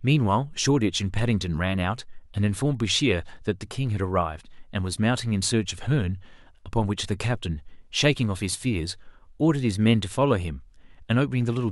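From 1.96 s to 11.53 s, a click recurs every 1.91 s, about seven in all. These are likely clock drift buffer slips, where a handful of samples is dropped or repeated. The waveform shows tiny step discontinuities, and the spectrogram shows thin vertical broadband lines.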